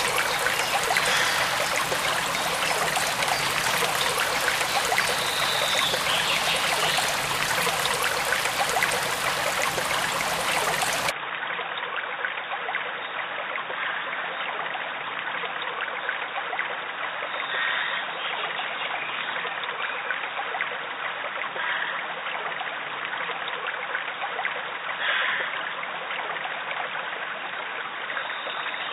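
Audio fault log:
11.10–28.92 s, input switched to a poorer device: the sound abruptly turns dull and boxy with nothing above 3.8 kHz, drops a few decibels and gains a faint new noise floor, with no gap at the change, likely from recording moving to a narrower-band microphone.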